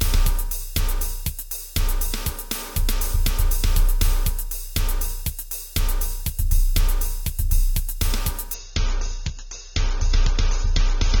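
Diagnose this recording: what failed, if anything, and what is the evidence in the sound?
At the network stage, the adaptive stream switched to a lower bitrate from 8.54 s to the end. With no gap, the treble suddenly disappears above 7.3 kHz and codec artefacts rise, consistent with a step down from about 96 kbit/s to 24 kbit/s.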